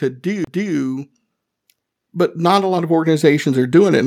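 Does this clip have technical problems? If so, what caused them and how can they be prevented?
Yes. At 0.44 to 0.47 s there is a CD skip: a jolt or a disc flaw threw the laser onto another turn of the spiral, so the player muted for about 30 ms and resumed from another point on the track. It is heard as a tick followed by an abrupt discontinuity in the speech. On a waveform it appears as a short flat gap with mismatched edges, and on a spectrogram as a thin vertical click line and a break in the harmonics. Cleaning the disc, isolating the player from vibration, or ripping with an error-correcting tool prevents this.

From 1.99 to 3.77 s, automatic gain rising lifts the level by about 5 dB. The gain control judged the input too quiet and raised it gradually, so the voice and background swell together over nearly two seconds. A waveform shows the envelope widening steadily across that span. 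On a spectrogram, every frequency band brightens together, noise floor included. Disabling automatic gain control and setting a fixed input level before recording prevents this.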